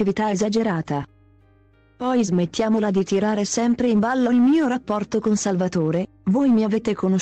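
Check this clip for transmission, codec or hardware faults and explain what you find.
No faults turn up anywhere in the clip. The audio holds steady throughout, with nothing that points to a problem in the signal chain.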